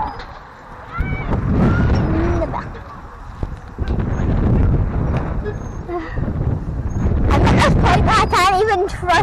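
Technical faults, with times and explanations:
No technical faults are present, so there are no times or explanations to give.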